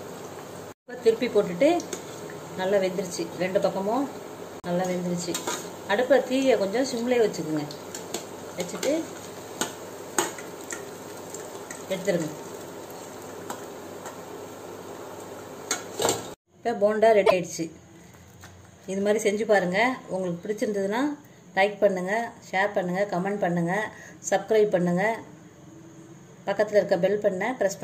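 At 4.59 s and 17.26 s, the audio skips ahead into a 70 ms glitch, likely a broken MP3 bit reservoir after cut frames.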